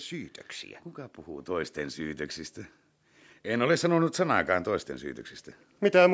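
From 3.3 s to 4.97 s, automatic gain rising occurs: the gain control judged the input too quiet and lifted its gain by about 4 dB over that span, so the speech and the background noise swell together gradually rather than jumping.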